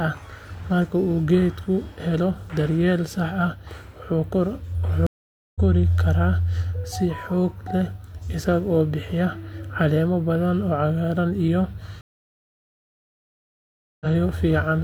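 At 5.07 s the speech cuts to silence for about 0.49 s, then picks up at 5.61 s roughly a third of a second further on. At 12.01 s a longer gap of about 2 s follows, resuming at 14.07 s around a second later. Both are stream reconnects: the connection dropped, the player restarted its decoder mid-stream and rejoined live. Unlike a plain dropout, the speech does not continue where it stopped. Material is skipped.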